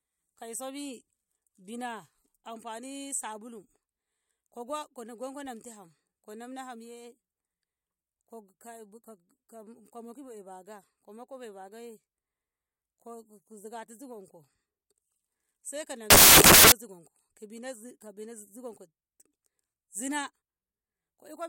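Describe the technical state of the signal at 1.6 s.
Nothing at 1.6 s points to a fault; the signal is intact at that moment.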